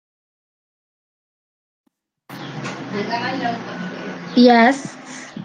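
No technical faults are audible anywhere in the speech recording.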